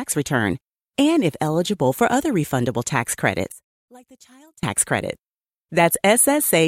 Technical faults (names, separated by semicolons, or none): one channel inverted